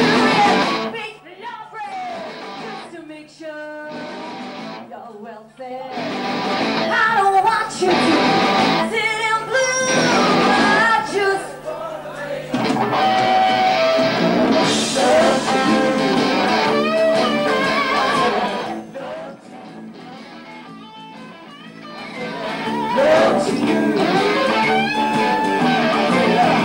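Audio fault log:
5.57–6.97 s, 18.20–19.32 s and 21.64–23.13 s: zipper noise. The level rises about 15 dB, falls about 20 dB, then rises about 20 dB. It moves in unsmoothed 3 dB jumps, roughly four or five a second. Each jump clicks, so the moves tick audibly.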